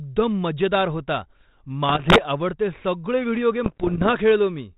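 From 1.89 to 2.23 s, and again from 3.64 to 4.07 s just after "सगळे व्हिडिओ", bit errors on an ADPCM link (roughly one bit in a hundred) derail the decoder's step size and predictor, producing pops and rasping bursts: jagged spikes and level jumps on the waveform, broadband vertical smears on a spectrogram.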